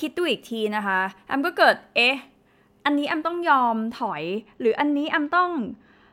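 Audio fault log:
4.08–6.13 s, channel delay (comb filtering): from here to the end one channel lags the other by a tiny amount, roughly a couple of samples, and the mono sum cancels the shared top end, notching out around 10 kHz, so the speech turns dull.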